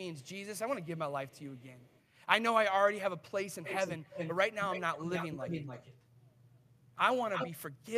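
Echo leak appears in five stretches of the speech. From 0.14 to 0.3 s and 0.82 to 2.04 s, a very faint copy trails the voice by 139 ms. From 3.64 to 4.35 s and 4.6 to 6.96 s, the copy lags by 278 ms and is clearly audible, and at 7.33 to 7.51 s it nearly matches the voice's level. The likely cause is a loudspeaker-side echo canceller passing microphone pickup back down the line.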